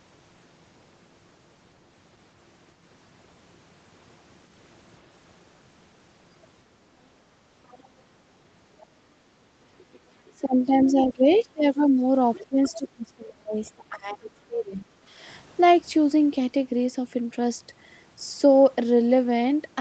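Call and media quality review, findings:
Other side's voice leaking through: faint second voice, brief, at 7.71–7.83 s, 11.33–11.43 s and 12.34–12.70 s, roughly 25 to 30 dB under the talker. Likely echo canceller residual: loudspeaker playback reaching the mic, not fully subtracted. Further trace at 13.66–13.70 s, faint, around 40 dB down. Same component, same mechanism.

Speech suppressed in double talk: talker level dips in pieces, 9.62–12.04 s, deepest about 20 dB, about 1.5 s affected in total. Likely echo canceller misclassifying near-end speech as echo while both sides talk, attenuating everything. Second episode 12.41–14.88 s, deeper, around 25 dB, about 2 s affected, overlapping the leak at 12.34 s. Same suppressor behaviour.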